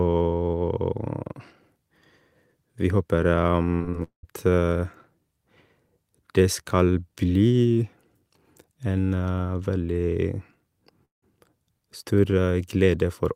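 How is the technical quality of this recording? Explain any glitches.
The speech has three network-related glitches clustered around 4 seconds, plus one near 11 seconds.

From 3.75 to 3.85 s, a burst of packet loss: about 40 ms went missing, the decoder stretched the last sound for 47 ms as a fading tail, and 12 ms was skipped on resumption.

From 3.91 to 3.95 s, short concealed packet loss: 20 ms never arrived, and a 22 ms extrapolated fill leaves a brief smear.

From 4.03 to 4.25 s and 11.05 to 11.24 s, the sound continues as a fading buzz or hiss, then drops to silence (120 ms and 160 ms) before returning with about 200 ms and 180 ms missing. The likely cause is a long network dropout.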